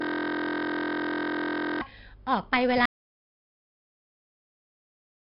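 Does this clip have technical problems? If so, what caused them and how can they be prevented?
Yes. Every sound throughout carries a gritty hiss that rises and falls with its level, sharp onsets crunch, and nothing reaches above 5.3 kHz, giving a dull, band-limited tone. This is heavy 4-bit ADPCM compression. Each sample is coded as a coarse step from a prediction, and the step size cannot keep up with fast changes, which fits a rate of about 44 kbps. To prevent it, record and deliver in a lossless or modern perceptual codec at a higher sample rate.

From the very start until 1.81 s, the audio is a steady buzz at 43.1 Hz, already going when the clip begins. This is a system hang loop. The machine or driver froze while the sound hardware kept replaying one 23.22 ms slice over and over, which fits a 1024-sample ring buffer. To prevent it, use stable drivers and have a watchdog mute output when the audio thread stops feeding the buffer.

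At 2.86 s the audio cuts to silence with no room tone, and it stays silent to the end. This is an audio dropout to silence. The input was likely lost through a disconnect, a failed link or a stray mute while the recorder kept writing silence. To prevent it, secure the connections and monitor input levels during recording.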